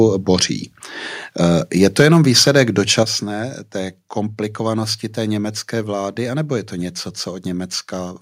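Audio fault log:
1.99–2.18 s, microphone overload. The loudest syllables turn harsh and crackly. The peaks run about 5 dB past the converter's limit, so a few percent of the samples are flattened at the limit. The likely cause is an input volume set too high, which chops the waveform tops.
2.02 s, microphone volume stepped down. Voice and background drop together by about 3 dB in one step. This likely comes from the call software cutting the input volume after that distorted peak.
2.47–2.62 s, microphone overload. The crackle returns on a loud stretch, milder this time. The peaks exceed the limit by about 2 dB, and around 3 percent of samples are clipped. The input likely still sits too hot despite the first cut.
3.03 s, microphone volume stepped down. A second sudden drop of about 6 dB lowers everything at once. The software likely reacted to the repeat overload with a larger gain cut.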